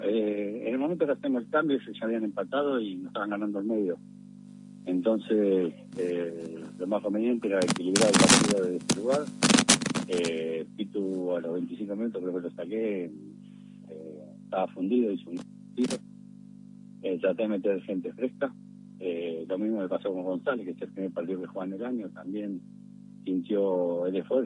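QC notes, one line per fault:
No faults heard anywhere in the clip.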